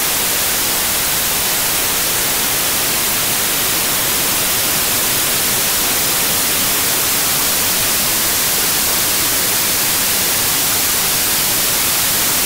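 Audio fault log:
Throughout: samples built from the wrong bytes. The reader assembles each sample from mismatched or misordered bytes, so the rapidly changing low-order bits land in the most significant positions. The result is loud, harsh broadband noise across the whole clip.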